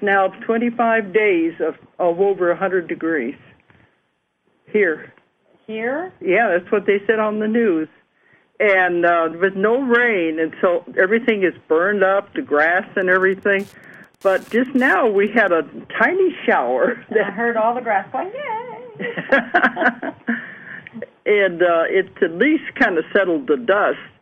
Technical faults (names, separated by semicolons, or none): Wi-Fi interference